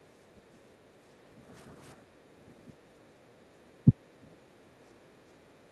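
From 0.0 to 1.53 s, 1.95 to 3.57 s and 4.18 to 5.72 s the background is gated by the echo canceller: it clamps the microphone while the far end plays, so room sound sinks by about 11, 10 and 9 dB, appearing as long, low-energy bands in the spectrogram's noise floor.

At 3.85 to 3.9 s the speech briefly dips by a few decibels for roughly 50 ms, likely speech suppressed in double talk as the canceller mistook both talkers for echo. On the waveform it shows as a short notch in the envelope.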